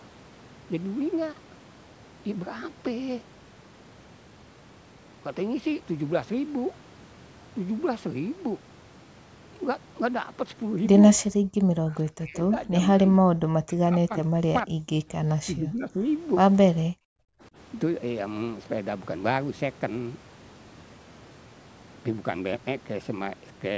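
An echo canceller likely mistook simultaneous talk for loudspeaker echo, causing speech suppressed in double talk: from 11.47 to 12.73 s, 12.97 to 16.06 s and 16.86 to 17.57 s, the speech dips by up to about 30 to 40 dB and breaks into fragments.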